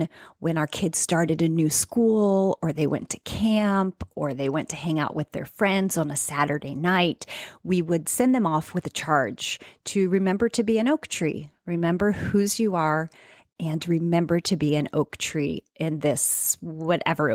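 No technical faults can be heard at any point in the recording.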